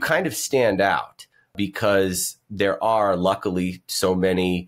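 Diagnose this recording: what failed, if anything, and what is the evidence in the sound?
Nothing in the chain from capture to playback has failed: the speech signal is continuous and intact, with no audible event at any stage to point to a problem.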